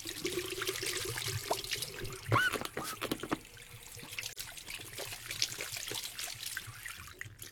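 At 4.29 s the stream suffers AAC frame loss with muting: about 43 ms of coded audio never reaches the decoder, which fits a single lost frame, and the decoder zeroes that spectrum. Overlapping windows fade the sound out and back in, leaving a brief dip until 4.38 s.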